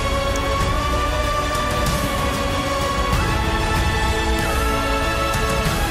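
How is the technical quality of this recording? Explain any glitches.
One glitch stands out. At 0.36 s there is an electrical switching spike, a sharp, fairly loud snap on top of the sound, likely from a nearby switch or static discharge arcing into the audio line.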